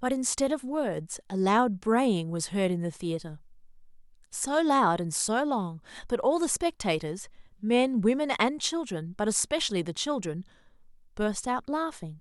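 On listening through this speech recording, nothing stood out as a technical fault at any point.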